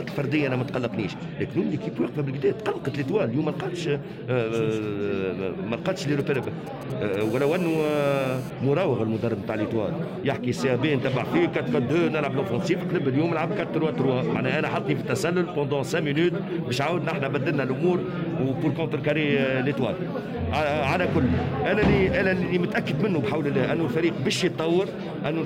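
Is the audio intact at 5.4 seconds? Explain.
Yes, the audio is intact at 5.4 seconds, with no dropout, click, distortion or other fault at that moment.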